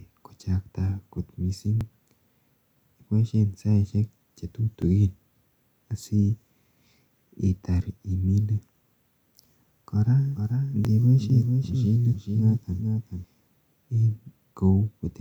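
At 1.81, 4.82, 7.83, 10.85 and 13.86 s there are clicky stutters from overlapping chunks. Each 3-second chunk starts early, so about 13 ms of speech replays at every join. From 10.35 to 13.24 s a doubled audio track runs underneath, a flat copy roughly 5 dB down and about 400 ms behind that cuts in and out abruptly, likely from a second, slower capture path.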